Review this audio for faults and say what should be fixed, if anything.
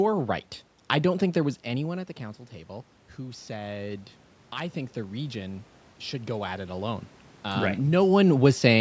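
Automatic gain rising occurs from 4.74 to 7.12 s, beginning after "table who said i" and settling before "um right". The input level fell by about 13 dB, so the gain control raised its gain by about 4 dB over more than two seconds, and the voice and room noise swell together. On a waveform, the whole envelope, noise floor included, climbs across that span. On a spectrogram, the background band brightens along with the speech. Keeping the talker at a steady distance from the microphone would prevent it.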